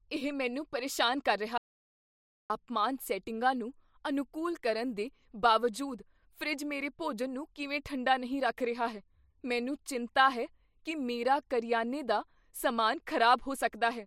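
An audio dropout to silence runs from 1.58 to 2.50 s, right after "ਮੈਨੂੰ ਪਰੇਸ਼ਾਨ ਕਰ ਰਿਹਾ": the speech cuts off into silence with no room tone, likely from the input being lost while recording continued, and returns mid-flow at "ਸੈਟਿੰਗਾਂ ਨੂੰ ਅਨੁਕੂਲ ਕਰਨ", with 0.92 s of speech missing.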